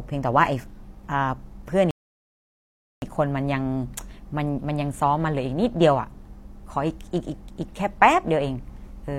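At 1.91 s the speech drops abruptly into silence, holds there for just over a second, and at 3.02 s picks up at exactly the point where it broke off, with no sound skipped or repeated. That pattern is a rebuffering stall: playback consumed all the audio downloaded so far and paused until more data arrived, leaving the content intact but stretching the clip by about 1.11 s of dead air.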